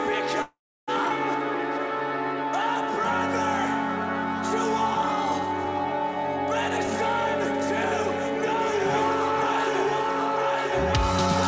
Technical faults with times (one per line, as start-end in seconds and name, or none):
0.42-0.90 call audio freeze